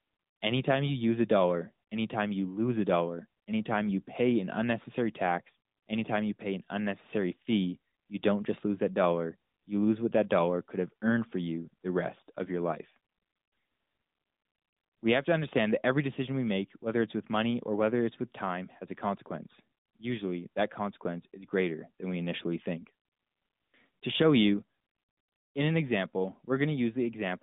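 No faults: the speech sits in a narrowband mobile channel, consistent with AMR-NB at its 12.2 kbps mode, passing roughly 150 Hz to 3.7 kHz with nothing above 3.8 kHz and only light codec coloration.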